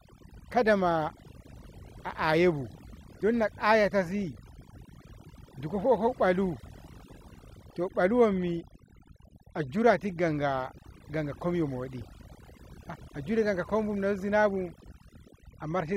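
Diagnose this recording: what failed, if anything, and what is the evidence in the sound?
Overdone noise removal at the call-processing stage, throughout. Background drops and breaks up into twinkling specks as quiet bands get gated out.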